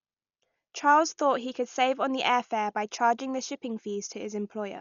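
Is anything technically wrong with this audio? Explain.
Yes. Throughout the speech there is heavy codec damage, most likely from Dolby Digital compression at a low bitrate, consistent with roughly 48 kbps. Nothing is present above 6.9 kHz, so the sound is dull. Many frequency lines were given no mantissa bits and refilled with dither noise, which causes the rough, fluttering noise around tonal parts. A plain low-pass filter would dull the sound without that grainy, fluttering fill.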